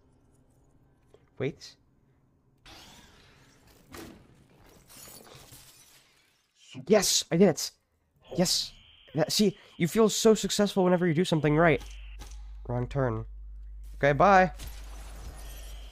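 At 11.45 s, mains hum appears and runs to the end. A ground loop or nearby transformer is leaking the 50 Hz power line into the signal. It sounds like a steady low drone with some low harmonics, sitting around 20 dB below the audio.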